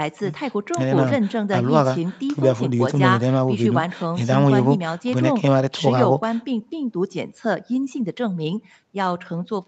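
No technical faults can be heard in this speech. Nothing reaches above 8 kHz, which fits audio carried over a call path that passes only that band.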